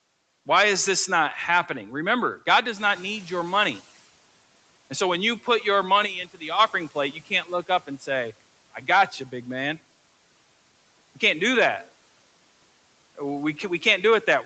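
From 2.76 to 4.07 s the noise suppressor is catching up: louder room noise gets through with less reduction at first, then sinks about 10 dB as its estimate adapts.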